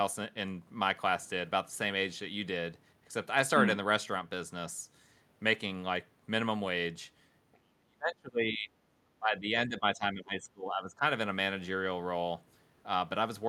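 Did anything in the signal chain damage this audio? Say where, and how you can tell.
Yes. The speech sinks sharply from 7.53 to 8.73 s, dropping by something like 35 dB at its deepest, then ducks again from 9.04 to 11.03 s by roughly 20 dB, with about a second and a half of that stretch affected. This points to call processing and is likely speech suppressed in double talk: with both ends talking at once, the echo canceller could not separate this talker from loudspeaker echo and turned the voice down.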